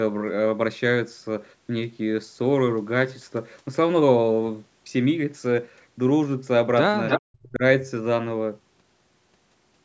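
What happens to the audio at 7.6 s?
From 7.29 to 7.63 s the speech drops by about 40 dB for roughly a third of a second. This is likely speech suppressed in double talk: the echo canceller couldn't separate the talker from loudspeaker echo, so it attenuated both.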